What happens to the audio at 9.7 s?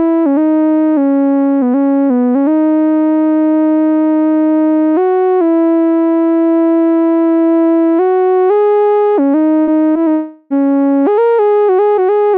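At 9.63 to 9.70 s there is a short concealed packet loss. About 40 ms of audio never arrived at the decoder in time. The receiver covered the gap with roughly 39 ms of substitute sound, extending what came just before. A voiced stretch keeps its pitch, and a noisy one becomes shaped noise. It then fades back into the real signal. The result is a brief smear or wobble.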